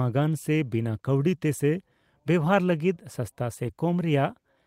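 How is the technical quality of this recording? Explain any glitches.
There's one glitch, from 3.65 to 3.67 s: a lost packet rebuilt from error correction. The next packet's low-bitrate backup filled that 20 ms, so there's no dropout, just a brief rougher, noisier patch.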